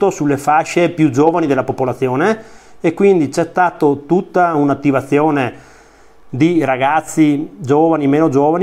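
No technical fault can be heard anywhere in this audio. Its level, timing and continuity hold steady throughout, with nothing breaking up or interrupting the sound.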